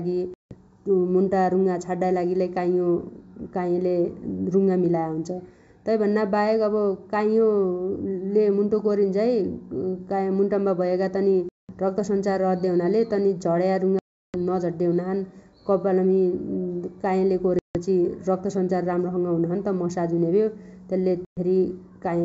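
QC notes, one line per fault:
Throughout, channel delay (comb filtering): one channel trails the other by roughly 0.15 ms, a fraction of a millisecond. When the two are summed to mono, whatever they share cancels at evenly spaced frequencies, with the first deep notch around 3 kHz and the next near 9 kHz. Within the roughly 7 kHz band that the G.722 wideband coding passes, the 3 kHz notch leaves the speech hollow and phasey, with a dip across its presence region.
0.34–0.55 s, 11.49–11.73 s, 13.99–14.37 s, 17.59–17.76 s, 21.25–21.38 s, packet loss on an ADPCM call: hard-edged gaps of 170, 200, 350, 160 and 120 ms, in that order, replace the missing packets with silence. During each gap, the decoder's adaptive predictor and step size stop tracking the sender's. When the speech resumes, it comes back slightly distorted, and it settles within some tens of milliseconds. The 350 ms gap at 13.99 s is the longest.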